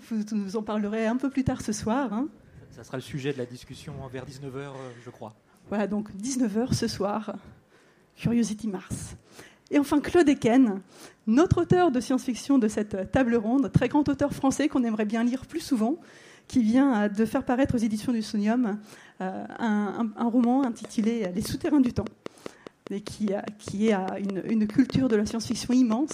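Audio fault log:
4.26 s, 14.56 s, 17.47 s: dropped buffer (overrun). Each is a jump ahead in the sound, about 40 ms lost at 4.26 s and about 10 ms at the others, likely samples overwritten before being read.
20.44–26.12 s: train of clicks. Steady ticking at about 4.9 per second, roughly thirty clicks about 10 dB above the sound, likely interference or a faulty connection or power supply injecting pulses.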